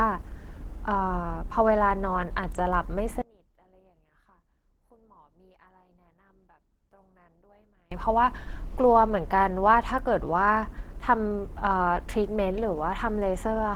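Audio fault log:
throughout Opus compression: speech sounds muffled, hoarse and grainy with plainly audible coding damage, likely from the hybrid speech mode at a rate around 16 kbps; content still reaches about 20 kHz.
3.22–7.92 s one channel inverted: level falls by about 31 dB as centred speech cancels in the mono sum, leaving a faint residue, likely from reversed polarity on one channel.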